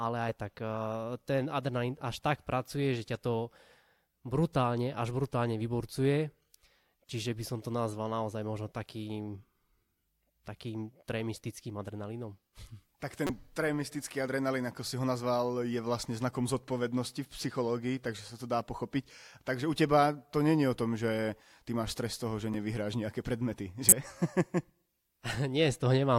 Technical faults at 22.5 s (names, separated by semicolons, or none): corrupt frame decoded